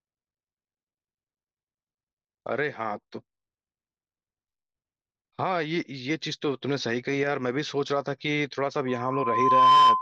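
From 8.88 s to the end, a steady 1 kHz tone swells over about a second into a squeal roughly 15 dB above the speech: loudspeaker feedback squeal, the microphone re-amplifying its own loudspeaker.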